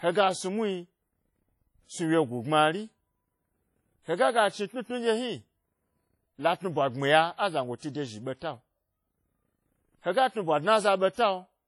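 From the start the speech carries heavy transform-codec damage, most likely WMA compression at a low bitrate, which fits a rate of around 32 kbps. Long transform blocks spread quantisation noise over tens of milliseconds, and weak spectral lines are dropped entirely. The result is a ringing, washy quality with a hiss that swells and recedes along with the speech level.

At 7.78 s and again at 11.13 s, a pre-echo is audible ahead of a sharp onset. In each case a short burst of hiss, about 40 ms long, arrives just before the attack itself. The attack lands late in a transform block, so the noise allotted for the loud portion is also spread evenly across the quiet stretch preceding it. That leading smear softens the transient and blurs its edge.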